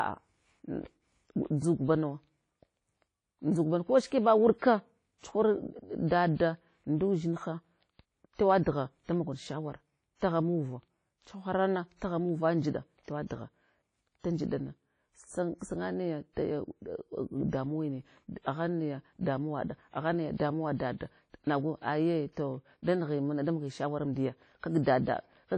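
A speech recording with likely WMA compression: washy, ringing transform-codec coding that fits a low 32 kbps bitrate, with the spectrogram empty above 10.1 kHz. Pre-echo puts a short hiss about 50 ms ahead of attacks at 4.07–4.12 s just after "nawa ko", at 5.18–5.23 s, and at 8.34–8.39 s just before "tewaɗgha da mog shawara", showing as a smeared noise smudge before each sharp onset.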